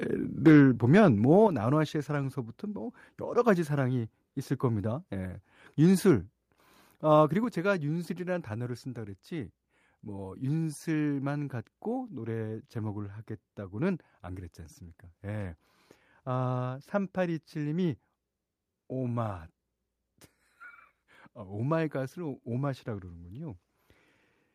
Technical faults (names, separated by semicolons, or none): microphone overload; microphone volume stepped down